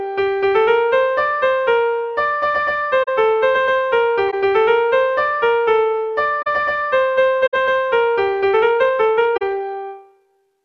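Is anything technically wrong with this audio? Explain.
Yes. There are corrupt frames concealed at 3.03–3.09, 4.29–4.34, 6.42–6.47, 7.46–7.54 and 9.37–9.42 s. Each damaged frame was covered by the decoder. Each gap fits two or three damaged frames.

A time-stretched section runs from 8.47 s to the end. The sound is sped up by 1.37 times, but the pitch holds. It turns abruptly rushed. Short pieces were likely dropped to shorten it.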